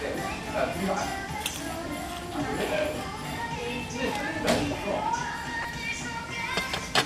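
A short everyday-sound recording with DAB burbling from 5.62 to 5.65 s. A brief patch of burbling cuts across the sound there. It hit three MP2 frames. Bit errors, well under one percent, slipped past error correction. Wrong samples put blips of noise into single sub-bands.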